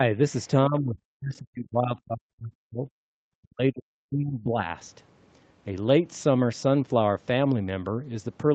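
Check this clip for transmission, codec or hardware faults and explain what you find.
One fault shows up, speech suppressed in double talk, while the whole clip tops out at 8 kHz as its call codec path allows. The speech sinks at 0.00–0.04 s by a few dB, then at 0.67–2.88 s and 3.21–4.72 s by around 40 dB. The likely cause is an echo canceller misreading overlapping talk as echo and attenuating everything. The waveform shows collapsed envelopes and the spectrogram faded, near-empty stretches.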